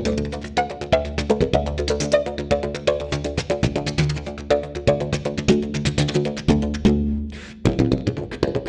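No technical faults can be heard anywhere in the audio.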